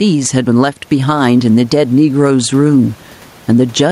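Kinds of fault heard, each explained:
Gain pumping: The room noise sits about 34 dB below the speech. Loud and quiet passages sound pressed together and squashed, with the level swinging by roughly 10 dB. The likely cause is microphone gain set far too high, with a fast limiter or compressor clamping down on every loud moment and releasing between them.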